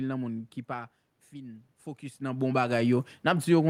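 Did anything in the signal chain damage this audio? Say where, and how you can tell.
Yes. Automatic gain rising, in the call processing stage, runs from 0.67 s after "nan moun ki" to the end at 3.69 s. The input level fell by about 14 dB, so the gain control slowly raised its gain, lifting the speech and room noise together in a gradual swell.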